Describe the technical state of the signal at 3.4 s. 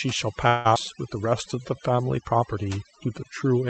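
At 3.4 s the speech carries overdone noise removal, present from start to end. The suppressor is cutting individual frequency bands it mistakes for noise, taking quiet speech detail with them. The background drops and breaks up into twinkling specks. Codec coding noise would stay as a steady grainy layer, but these specks flicker band by band as the suppressor switches. The top-end limit near 8 kHz is from the call path, which sounds consistent with Opus around 32 kbps.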